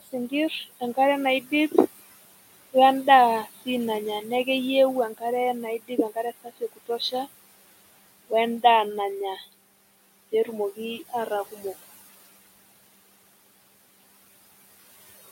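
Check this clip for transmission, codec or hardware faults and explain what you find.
The clip has two faults, both from a noise suppressor working against steady room noise that sits about 16 dB below the speech.

Noise suppressor artifacts run through all of the speech. Between phrases the background sinks away, and it swells back under each phrase. The suppressor judges each frequency band, frame by frame, as noise or signal, and pulls the bands it takes for noise down by about 19 dB. Because those decisions keep flipping as the speech starts and stops, the leftover noise pumps instead of staying steady.

Speech cut by the noise suppressor appears at 1.41 to 1.52 s, 3.44 to 3.67 s, 5.63 to 6.24 s, 6.44 to 7.27 s, 9.36 to 9.53 s and 11.52 to 11.63 s. In each span, soft parts of the speech sound swallowed or faint for roughly a tenth to a fifth of a second, dropping by about 10 to 21 dB. 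The deepest cut, about 21 dB, falls near 6.4 to 7.3 s. The suppressor mistook quiet speech energy for background noise and turned it down along with the room noise.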